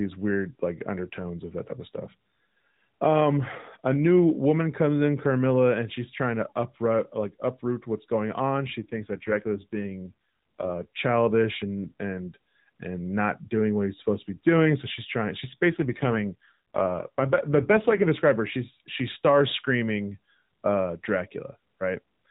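From 8.80 to 10.86 s and again from 15.70 to 18.08 s, the speech turns rougher and buzzier, which fits an AMR rate drop from 12.2 to about 5.9 kbps. Unlike packet loss, nothing goes silent, and the 4 kHz narrowband ceiling stays unchanged.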